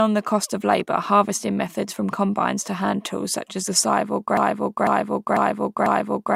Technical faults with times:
4.37-6.36 broken-record loop

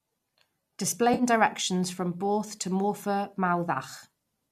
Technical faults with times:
1.14-1.23 AAC frame loss with concealment

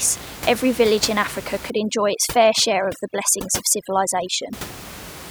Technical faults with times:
1.70-4.53 overdone noise removal

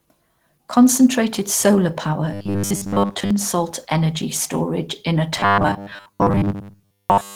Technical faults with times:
0.00-7.36 Opus compression
2.34-3.31 robotic sound from repeated short buffers
5.37-7.36 robotic sound from repeated short buffers

